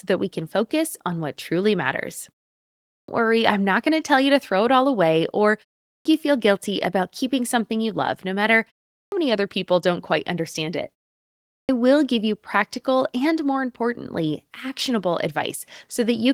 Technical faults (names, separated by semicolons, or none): clipped start after a pause